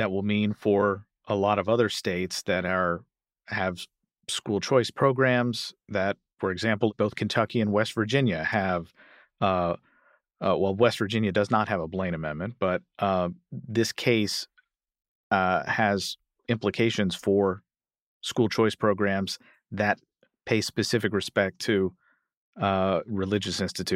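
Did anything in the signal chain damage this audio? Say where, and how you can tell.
No, nothing along the chain from capture through conversion, transmission and playback left any audible damage on this speech recording.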